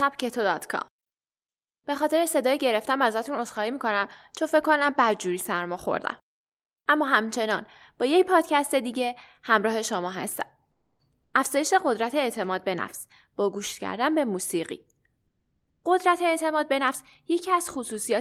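Speech, with comfort noise in place of the background at 10.71–10.99 s (280 ms) and 15.27–15.83 s (560 ms): the quiet background turns flat and featureless, about 4 dB and 3 dB lower, likely Opus DTX, unlike a gate or dropout, which would go silent.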